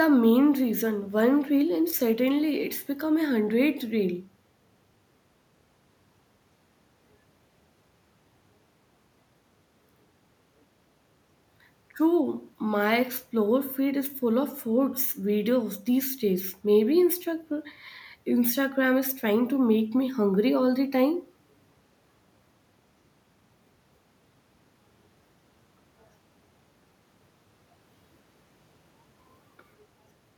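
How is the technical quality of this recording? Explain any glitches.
No glitches or technical faults can be heard here.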